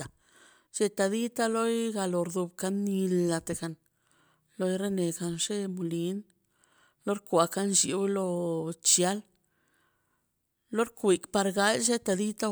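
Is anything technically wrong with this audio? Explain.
No technical faults are audible.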